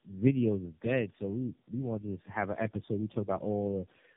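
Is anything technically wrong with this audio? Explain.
Yes. Right through the clip you're hearing tandem speech coding: the speech has been squeezed by three low-rate speech codecs one after another, which fits a chain like G.729A into AMR-NB and then AMR-NB again, with plain telephone-band hops in between. Every border decodes and re-encodes the last coder's already damaged output, so the errors stack up. The result is rough, muffled and warbly, and there's nothing above 3.4 kHz.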